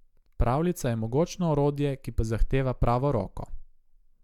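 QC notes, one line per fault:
The speech signal shows no audible technical fault anywhere in the clip.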